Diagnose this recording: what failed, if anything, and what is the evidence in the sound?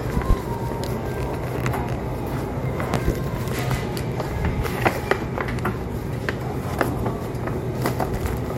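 Loud pops in the analogue wiring. One at 0.30 s, two at 2.94 to 3.12 s, about 20 dB over the sound. Likely a plug or switch voltage step.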